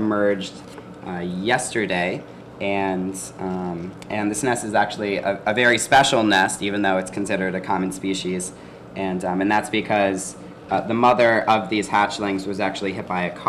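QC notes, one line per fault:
No faults found.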